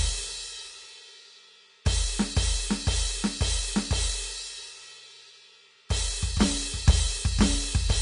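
Throughout, the music stops at 10.6 kHz and its treble turns to grainy hiss, likely Vorbis compression near 34 kbps rather than clean low-pass filtering.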